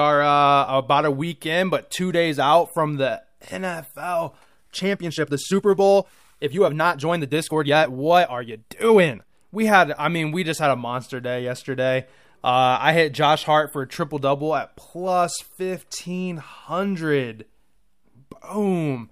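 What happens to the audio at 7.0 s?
At 7.0 s the speech sits inside a time-stretched section running from 4.37 to 9.33 s, where the delivery abruptly quickens to about 1.55 times its natural pace while the pitch stays put. The likely cause is software squeezing this stretch to fit a shorter length, holding pitch by discarding short slices of the waveform. Those removed slices make the passage sound rushed.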